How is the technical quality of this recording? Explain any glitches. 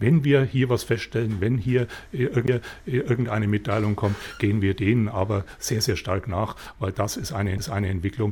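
Playback is interrupted twice by CD skips. At 2.47 s and 7.58 s the laser jumps to another turn of the spiral, muting for about 10 ms and 7 ms respectively, then resuming with a tick and an abrupt jump in the sound.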